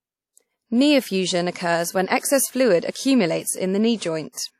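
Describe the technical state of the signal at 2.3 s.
At 2.3 s the speech has the same missing top end it has for the whole clip: nothing above about 15.3 kHz, plus the artefacts of the first encoding. That points to low-bitrate audio saved at a high bitrate, likely a 48 kbit/s-class encode later re-encoded as a roomy MP3 that can't restore what was removed.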